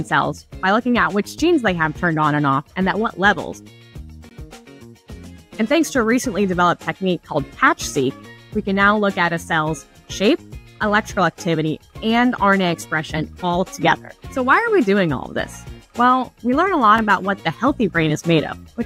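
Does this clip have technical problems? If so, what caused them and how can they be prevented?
Yes: blocks of digital silence at 1.39 s, 4.29–4.31 s and 16.98 s cut the sound to zero with no fade, unlike a smoothed, concealed dropout. The output buffer was probably not filled in time, so a larger buffer and higher audio-thread priority would prevent it.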